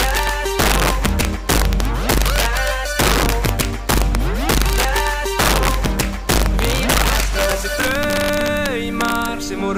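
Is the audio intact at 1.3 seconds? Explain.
No. Integer overflow runs through the whole clip, including 1.3 s. The signal is driven about 5 dB past the integer limit. Peaks that exceed it wrap to the opposite sign instead of being held. A small share of samples flip, heard as violent, sharp cracks on loud moments.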